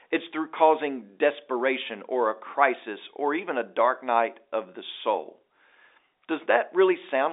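No technical faults can be heard in this telephone-band speech.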